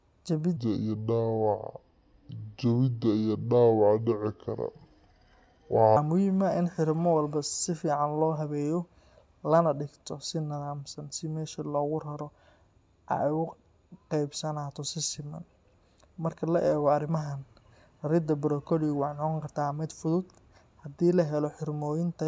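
Speech with a wrong sample rate from 0.57 to 5.97 s, just before "muhiim ah in": it runs at 0.73 speed and about 5.5 semitones low, which fits 22 kHz audio played at 16 kHz. On a spectrogram, formants sit compressed downward and time-stretched.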